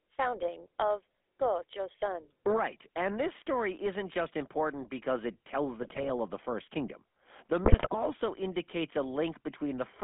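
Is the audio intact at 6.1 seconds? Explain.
No. Corrupted bits reached the decoder between "important because it tells" and "of the", from 5.82 to 6.10 s. Damaged filter, pitch and gain values distort the spectrum and jolt the level frame by frame, so these GSM bit errors break the speech into squawks, pops and gargling that are still ending at 6.1 s. Under this, and through the whole clip, runs the GSM full-rate codec. It rebuilds speech at 13 kbps from a vocal-tract model driven by sparse regular pulses, in a band of roughly 200 Hz to 3.5 kHz. The result is a plainly buzzy, gravelly roughness.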